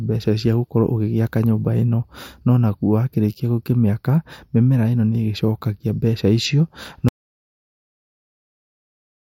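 At 7.09 s the speech cuts off mid-flow in an audio dropout to silence that lasts to the end, about 2.3 s. The gap is silent with no room tone, most likely because the input was lost while recording continued.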